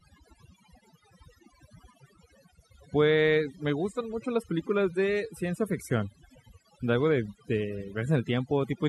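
Overdone noise removal runs throughout the speech. Aggressive noise reduction mutes individual frequency bands near the noise floor, leaving twinkling specks in near-silent gaps. Unlike a noise gate, which cuts everything at once, the damage here is scattered across separate frequencies.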